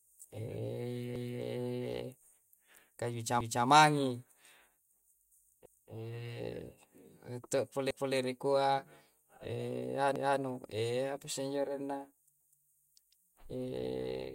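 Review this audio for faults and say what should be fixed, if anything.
The speech has overlapping chunks, with a stutter at 1.16, 3.41, 5.66, 7.91 and 10.16 s. Each 2 s chunk begins 250 ms before the previous one ended, so that slice of speech plays twice. The audio is repeated rather than missing, which separates this from dropouts. Trim or crossfade the overlap when reassembling chunks so each join picks up exactly where the previous chunk stopped.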